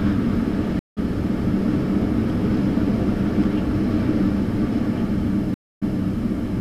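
At 0.79 to 0.98 s a stream reconnect drops out for 175 ms, then resumes roughly 0.2 s further on, skipping material. At 5.54 to 6.00 s another reconnect silences the sound for 274 ms and restarts 186 ms earlier, repeating a short stretch as the server resends buffered data.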